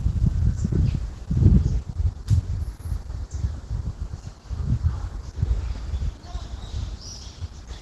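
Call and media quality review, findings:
Sound muffled, hoarse and grainy for the whole clip, nothing above about 12.1 kHz. Opus compression, likely the encoder dropped into its hybrid speech mode at a very low rate, fitting roughly 12 kbps. Bands thinly coded and noise-filled, bandwidth cut.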